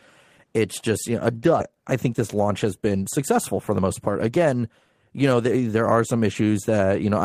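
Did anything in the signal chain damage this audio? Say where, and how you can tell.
Yes. At 1.59 to 1.61 s there is a skip ahead in the network path: about a second and a half of speech is missing, and the two sides butt together with no gap. On a spectrogram the formant tracks jump abruptly, and the waveform shows a discontinuity but no silence.

The jitter buffer then applies a jitter buffer speed-up, from 1.71 to 4.59 s at 110% speed and from 5.10 to 5.77 s at 112%. It trims pitch-period-sized pieces repeatedly, roughly 0.3 s and a tenth of a second in total. Pitch stays steady, so harmonic spacing looks unchanged, but syllables sit visibly closer together and the speech sounds hurried.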